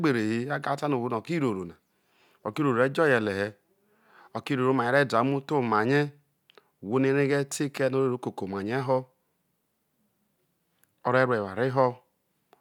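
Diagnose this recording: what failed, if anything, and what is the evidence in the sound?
Nothing here points to a failure at any stage; the speech carries along without a single event worth flagging.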